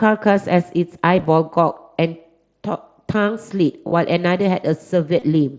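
At 1.17 to 1.26 s, 3.87 to 3.92 s and 5.19 to 5.22 s there's concealed Bluetooth headset packet loss. Dropped headset packets got patched by repeating recent waveform, giving brief buzzy smears and a slight warble.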